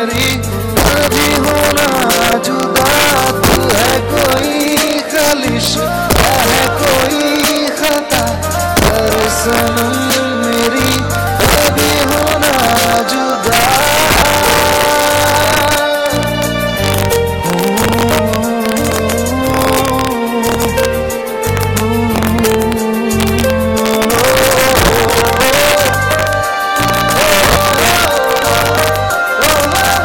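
Somewhere in the chain, a gain or mixing stage pushes the signal about 4 dB past the largest value its integer format can hold, and instead of limiting at the ceiling the arithmetic wraps around to the opposite extreme. That is integer overflow, and it runs throughout the audio. Only a small fraction of samples, roughly one or two percent, cross the limit, but each one jumps across the full range, so the loudest peaks turn into harsh, violent cracks far sharper than ordinary clipping.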